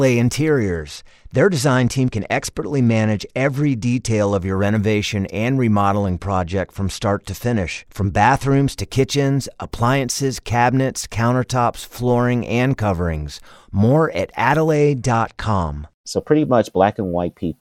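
From 0.61 to 4.39 s the speech turns dull and gritty. This is a Bluetooth SBC bit pool drop. The link was congested, so fewer bits went to each frame. The highest sub-bands lost their share, and the rest were coarsely quantised. The sound points to a fall from a bit pool near 28 to about 12, roughly 96 kbps. The same loss of treble and grainy noise returns from 6.00 to 8.78 s and from 14.72 to 17.41 s.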